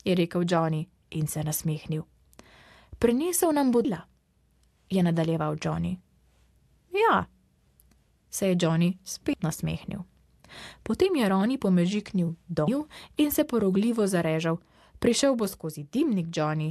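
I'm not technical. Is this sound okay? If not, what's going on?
No. At 3.84, 9.33 and 12.67 seconds the sound jumps forward, a problem called compressed frames skipped. Small chunks of the compressed file were missing or rejected as damaged, so playback leaps ahead by about a third of a second, a tenth of a second, and a fifth of a second. Unlike a dropout, there's no silent gap: time simply goes missing. Unlike a crackle, each join is a soft smeared blip, not a sharp click.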